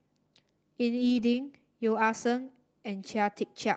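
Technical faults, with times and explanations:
0.97–1.23 s, lost packet rebuilt from error correction: Several packets in this stretch of speech went missing. The packet after each one carried a low-bitrate copy of it, and the Opus decoder played that copy. So there is no gap or dropout. About 140 ms of the passage was filled this way, and it sounds rougher and noisier than the surrounding audio. The call's bandwidth already stops near 8 kHz, so the copies lose no extra top end.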